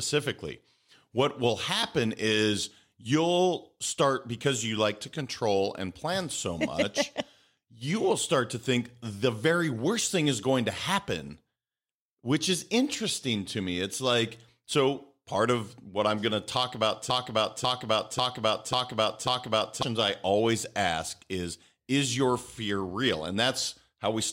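Speech recording with a broken-record loop from 17.1 to 19.83 s: a 0.54 s fragment repeats exactly, back to back, five times, and the audio due in that span is lost. The likely cause is a stalled player, encoder or stream resending its last buffered fragment.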